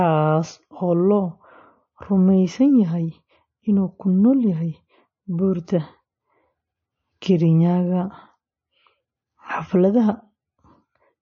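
Throughout the speech, nothing is present above 7.6 kHz, and a watery, swirling texture with chirpy sibilants and smeared onsets is plainly audible. This points to MP3 compression, likely at a low bitrate of 31 kbps, cutting the treble and switching weak frequency lines on and off.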